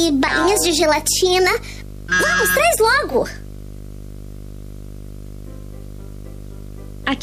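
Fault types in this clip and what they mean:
Video or display buzz: a screen or video cable is coupling into the audio, giving a raspy buzz at the 50 Hz field rate with hash spread above it, plus a thin whine at 15.6 kHz from the line scan, all the way through and sitting only modestly below the wanted sound. The 15.6 kHz tone is what separates it from mains hum or ground-loop buzz, which share the 50 Hz base but never carry that line-rate whistle.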